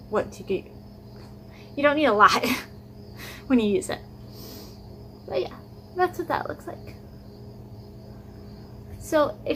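Nothing in the audio stood out as a technical problem on listening.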